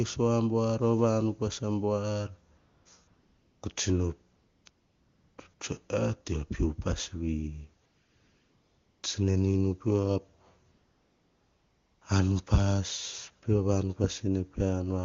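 The phone's voice activity detection judged the talker silent and stopped sending speech frames, so the receiver substituted AMR comfort noise: smooth, steady synthetic hiss replacing the real background and switching in and out. This happens at 2.57 to 2.85 s; at 3.07 to 3.61 s, just before "ko tsino"; at 4.35 to 4.65 s, right after it; at 4.69 to 5.37 s; briefly at 5.53 to 5.59 s; at 7.85 to 9.03 s; and at 10.71 to 12.01 s.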